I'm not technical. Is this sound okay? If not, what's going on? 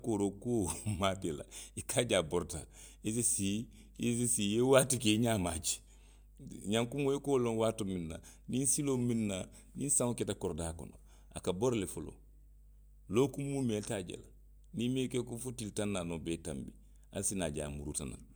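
No. A steady low hum at 50 Hz runs under the speech from start to finish. This is mains hum, electricity from the power supply leaking into the recording. Unlike hiss, it is a fixed low tone.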